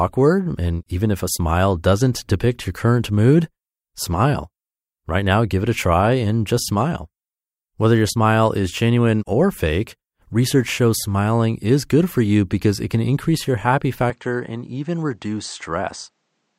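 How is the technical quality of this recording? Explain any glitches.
One glitch mars the recording. At 14.1 s, just after "can increase your happy", the input likely switched to a poorer device. With no gap, the band stops at 8.8 kHz, so the speech turns duller, about 5 dB quieter, with a faint new noise floor, until 16.6 s.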